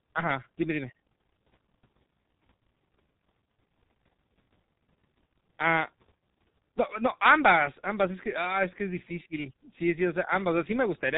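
Speech runs through the G.723.1 codec for the whole clip. Nothing above 3.8 kHz survives, so the sound is dull and muffled. The codec damage is heavy. It works in 30 ms frames and updates its voice model slowly, so the voice turns hoarse and consonants smear into each other. The coarse, rough texture fits a rate of around 6 kbit/s.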